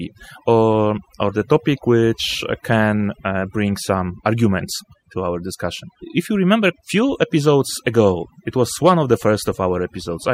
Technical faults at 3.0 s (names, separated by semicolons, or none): overdone noise removal